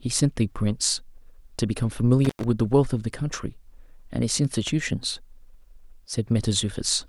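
At 2.24 to 2.44 s the speech drops out with crackle at both edges and faint hiss between them, an intermittent contact where a loose connection opened for about 98 ms.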